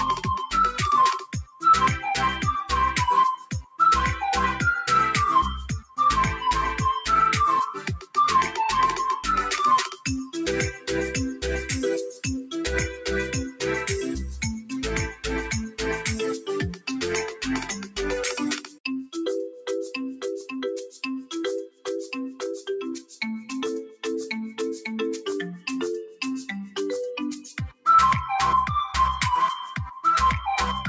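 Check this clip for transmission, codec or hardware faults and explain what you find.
The faults come from a speech noise suppressor that stays active on non-speech audio. It pulls held and fading sound down.

A noise suppressor applied to music or sounds runs throughout. It treats steady tone and decay as noise, so level swings by about 5 dB and the sound pumps and thins.

Sound cut by the noise suppressor occurs at 1.19–1.63 s, 3.36–3.79 s, 5.82–5.98 s, 7.78–8.17 s, 9.9–10.88 s, 15.13–19.15 s, 20.16–24.04 s and 25.59–26.21 s. Sustained parts sink by about 13 to 18 dB, with tails clipped short. The longest stretches, 15.13–19.15 s and 20.16–24.04 s, lose roughly a second each. The call microphone processing's 8 kHz upper limit is normal.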